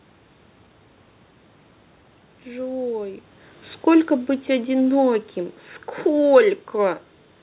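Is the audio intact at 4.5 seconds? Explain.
No. At 4.5 seconds the automatic gain is falling, from 3.87 to 5.24 s. The gain control judged the input too loud or its background noise too strong and eased its gain down by about 3 dB. The sound sinks gradually, and the background noise sinks with it.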